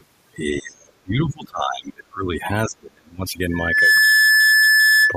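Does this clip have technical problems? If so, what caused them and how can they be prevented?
Yes. There are four kinds of fault.

Overdone noise removal runs through the whole recording. The suppressor was set too aggressively, so it shut down individual frequency bands wherever they came close to its noise estimate, and it took the quieter parts of the speech with them. The background collapses to near silence sprinkled with twinkling specks. On a spectrogram the gaps between words are almost black, with isolated bright dots scattered through them, and the speech harmonics look ragged and full of holes. To prevent it, use a gentler reduction setting, or cut the noise at the source instead of relying on the processor.

The other side's voice leaking through appears twice: very faintly from 0.00 to 0.04 s, and somewhat more clearly from 0.55 to 0.59 s. Each is a short scrap of a second voice. 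The likely cause is that this device plays the far end over a loudspeaker and the echo canceller left some of it in the microphone signal. On a spectrogram these show as brief, dim smears of separate harmonic structure, and they are barely visible on the waveform. To prevent it, use a headset or tune the echo canceller better, so the far-end playback never reaches the outgoing signal.

Speech suppressed in double talk runs from 0.53 to 2.45 s and again from 2.66 to 3.25 s. In these stretches the speech dips, at worst falling by around 30 dB. The likely cause is both sides talking at once, so the echo canceller could not tell the local speech from the loudspeaker echo and turned both down. The waveform shows sudden notches in the envelope, and the spectrogram shows the speech energy fading in patches. To prevent it, use an echo canceller with proper double-talk detection, or use a headset so there is no echo to fight.

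Loudspeaker feedback squeal begins at 3.50 s and lasts to the end at 5.17 s. A single tone at 1.7 kHz swells over about 0.4 s and then sits a little above the speech level. The microphone is picking up the loudspeaker it feeds, and at that frequency the loop gain exceeds one, so the tone keeps building on itself. On a spectrogram it is a bright, steady horizontal line, and the waveform thickens into a dense, even band. To prevent it, lower the loudspeaker gain, move the microphone away from the speaker, or notch out 1.7 kHz.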